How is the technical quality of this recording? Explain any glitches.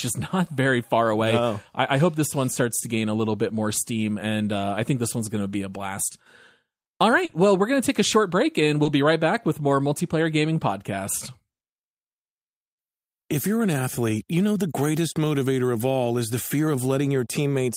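The recording has brief network glitches at three points in the speech.

Short concealed packet loss occurs at 7.25 to 7.31 s, where about 40 ms is missing, and at 8.83 to 8.87 s, where about 20 ms is missing, just after "a short break and" and before "be right back with". That audio never reached the decoder in time. The receiver stretched the preceding sound to fill the hole, then blended back. Each spot is heard as a quick smear or wobble.

A lost packet rebuilt from error correction follows each of those holes, at 7.29 to 7.35 s and 8.85 to 8.87 s. It also occurs alone at 16.05 to 16.07 s, between "the greatest motivator of" and "is the fear". Here the next packet carried a low-bitrate copy of the lost audio. The decoder played that copy, so nothing drops out. The first rebuilt stretch lasts 40 ms, which points to two lost packets. The others last 20 ms each, which fits a single packet. 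These moments sound briefly rougher and noisier.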